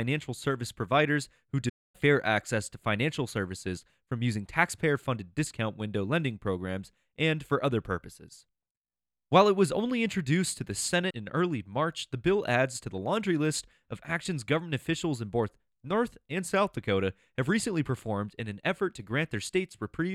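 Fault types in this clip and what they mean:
Playback stall: the speech cuts to silence for about a quarter second after "service providers who", likely the player starving for data, then resumes at "access to financial services".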